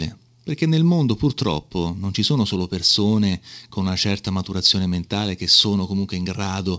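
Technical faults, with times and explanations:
4.65–4.71 s and 5.53–5.61 s, microphone overload: the loudest syllables after "persone con una certa" and after "mentale che" turn harsh and crackly, most likely because input gain pushed peaks about 2 dB and then about 4 dB past the converter's limit, flattening their tops. The second burst is rougher, with more of the waveform clipped. Unlike the call codec's steady dullness above 8 kHz, which fits G.722 at 64 kbps, this distortion appears only on the peaks.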